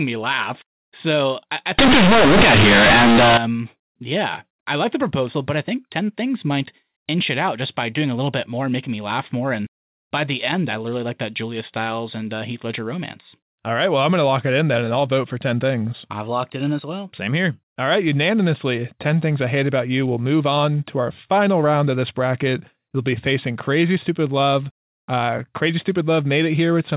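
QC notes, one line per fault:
1.79–3.37 s, companded audio read as linear: a burst of very loud, buzzy distortion with heavy noise filling the gaps, as mu-law telephone bytes are played as raw 8-bit samples without expansion, so every sign change throws the waveform across half its range.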